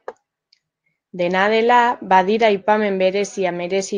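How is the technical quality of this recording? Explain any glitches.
The technical quality is good, with no glitches to explain in this speech recording, which has passed through a call path that limits it to 12 kHz.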